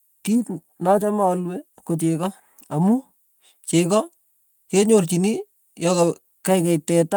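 Nothing goes wrong anywhere in this bit of speech, so there's no fault to point to at any moment.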